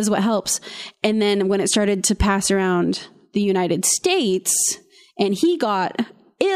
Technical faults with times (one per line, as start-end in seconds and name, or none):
none